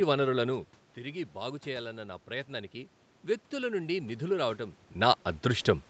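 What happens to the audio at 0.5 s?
Nothing goes wrong at that point: the audio is intact, and the change in level around half a second in is simply the talker shifting position relative to the microphone, not a fault in the system.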